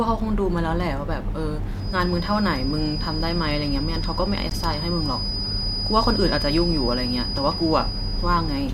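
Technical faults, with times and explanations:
1.74 s to end, feedback whistle: a thin 4.9 kHz tone, swelling and fading slowly, sits about 10 dB under the speech, likely from a loudspeaker-microphone loop held just below runaway.
4.50 s, gap between stream segments: a hard-edged 15 ms silence where two segments' timestamps fail to meet, which fits 4-second segments. No audio is lost.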